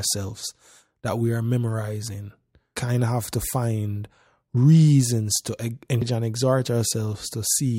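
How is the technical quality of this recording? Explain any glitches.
The recording has two brief glitches at 2.77 s and 6.02 s, both from damaged data in a compressed stream. Corrupted bytes make the decoder misread frames and lose sync, leaving a chirp, squawk, click or short hole.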